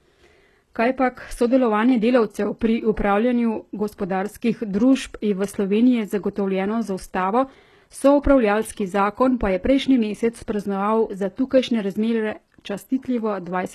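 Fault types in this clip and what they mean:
HE-AAC compression: Throughout the speech the treble sounds synthetic, with s sounds gritty, metallic and lispy, heavy damage that is likely from HE-AAC coding at a rate around 16 kbps. The top band is rebuilt by copying lower bands upward, so its harmonics fail to line up with the voice below, and nothing reaches above 12.3 kHz. Plain low-pass filtering would sound dull instead; here the top stays present but false.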